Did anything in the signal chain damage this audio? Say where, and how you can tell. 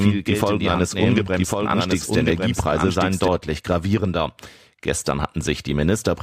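Yes. From the start of the clip until 3.28 s there is a doubled audio track: a full-band copy of the speech runs about a second behind the original and about 5 dB quieter. It has no reverb tail or room colouring, and it stops abruptly at 3.28 s. The likely cause is a second, slower capture path or an edit holding two out-of-step copies. On a spectrogram, every speech pattern reappears intact about a second later.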